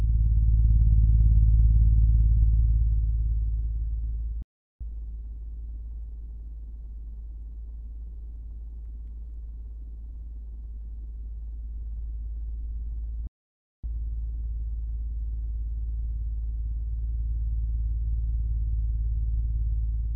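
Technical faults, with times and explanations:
4.42 to 4.81 s and 13.27 to 13.84 s, playback stall: the sound halts mid-flow and goes silent for 0.38 s, then 0.57 s, before resuming, likely the player running out of data. Unlike a brief dropout, the gaps are long.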